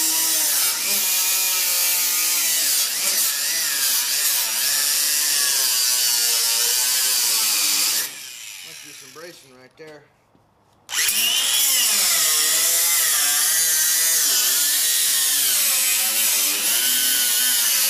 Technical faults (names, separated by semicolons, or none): chunks out of order